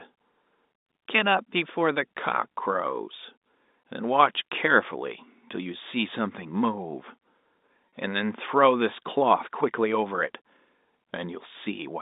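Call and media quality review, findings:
Packet loss with pitch repetition, 7.89–7.92 s: a 30 ms gap patched by looping the last pitch period, so a short buzzy hold over the G.711 telephone band. Looks like one dropped packet.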